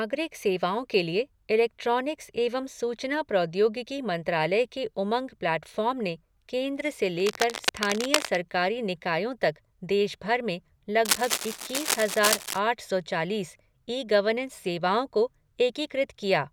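Cable scratch noise at 7.2–8.35 s and 11.05–12.59 s: dense, uneven rustling bursts just under the speech, likely a worn connector moved, unlike steady hiss.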